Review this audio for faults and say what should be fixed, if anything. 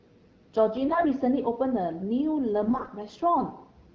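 AMR bit errors roughen the speech from 0.88 to 1.05 s and again from 2.63 to 2.90 s. The first burst is harsher, with roughly a tenth of the bits wrong. Flipped low-priority bits misplace the excitation pulses and skew fine pitch, gain and spectral values, so the voice turns hoarse and gargly. Unlike packet loss, pitch and level hold steady and nothing drops out or fades. Stronger channel coding or a cleaner radio link would prevent it.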